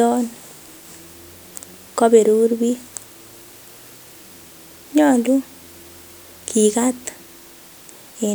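No dropouts, distortion, timing glitches or other technical faults can be heard anywhere in the signal.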